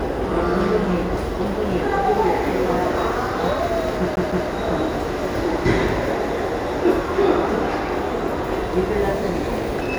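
A short recording of sounds with one glitch: from 4.16 to 4.48 s it does the classic CD stuck on one turn stutter. A slice of about 0.16 s plays twice in a row, each pass cut off by a tiny mute where the pickup jumps back. That's what you get when a scratch knocks the laser back a track at the same point on each rotation, so the same bit keeps replaying until it breaks free.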